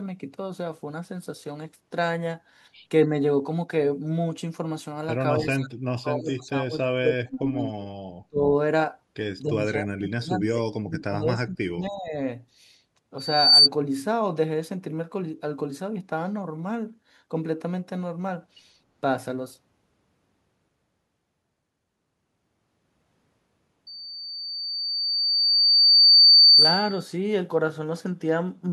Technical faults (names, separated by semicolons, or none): speech suppressed in double talk; loudspeaker feedback squeal